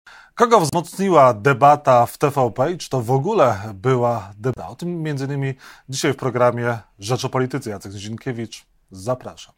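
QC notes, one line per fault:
0.70–0.75 s and 4.54–4.58 s, damaged data in a compressed stream: two short blips, roughly 50 ms and 45 ms, break into the speech. At each point the compressed data is corrupt, so the decoder misreads the affected frames and turns them into a brief glitch instead of the intended signal. It then loses sync and hunts for the next valid frame header before clean speech resumes.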